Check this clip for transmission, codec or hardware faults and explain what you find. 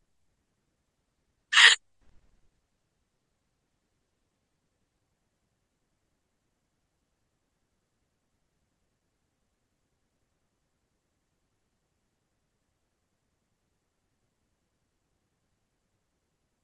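One fault is present. From 0.99 to 4.99 s, an adaptive stream at a lower bitrate: a slowed connection forces a leaner encode, suggesting roughly 32 rather than 96 kbit/s. The sound turns duller and more artefact-laden without a gap. A spectrogram shows a hard ceiling at 9.7 kHz.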